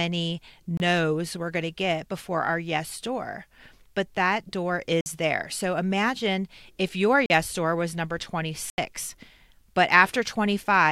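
Blocks of digital silence drop the speech to silence at 0.77 s (27 ms, before "we're going to get"), 5.01 s (52 ms, after "door but that door"), 7.26 s (40 ms) and 8.70 s (80 ms, after "door was number"). The sound cuts out and back with no fade, and the longer gaps are heard as holes.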